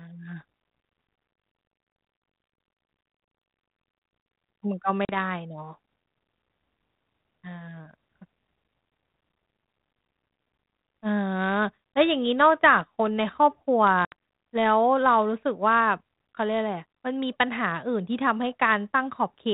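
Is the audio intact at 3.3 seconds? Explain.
No. Packet loss on an ADPCM call hits from 3.25 to 3.33 s: about four short runs, none longer than 10 ms, drop 40 ms in total. Silence fills each hole, the decoder's predictor and step size lose step with the sender's, and speech resumes slightly distorted before settling.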